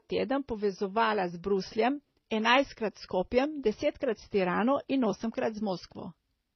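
Throughout the speech, two kinds of damage sound at once: a dull, early-stopping top end with swirly smearing, overlaid by a synthetic, warbly high band. This is likely transcoding between lossy codecs, with MP3 re-encoded as HE-AAC, both sounding near 24 kbit/s.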